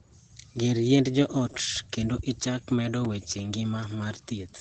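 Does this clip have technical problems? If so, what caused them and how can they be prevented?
Yes. The speech carries Opus voice compression throughout: it sounds muffled, slightly hoarse and robotic, consistent with SILK coding at around 12 kbps in 20 ms frames. On a spectrogram, energy stops abruptly at about 8.7 kHz, with smeared, grainy detail below that ceiling. Encoding at a higher bitrate, or from the uncompressed source, would prevent it.

At 3.05 s, just after "ot kendo ichak medo", there is a block of digital silence about 5 ms long. The output buffer was likely not filled in time, so the sound cuts out and back without a fade, heard as a brief tick or dip. The waveform shows a short, near-flat gap with abrupt edges, and the spectrogram shows a thin blank strip. Larger buffers or lighter real-time processing would prevent the dropout.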